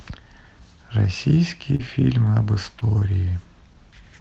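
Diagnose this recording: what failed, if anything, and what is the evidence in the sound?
The network dropped packets, which shows up as short concealed packet loss. Brief smears at 1.75–1.81 s, 2.79–2.83 s and 2.99–3.03 s are where the receiver extended the last sound across gaps of roughly 40 ms, then 20 ms twice, before blending back. The call codec's top end stops around 8 kHz.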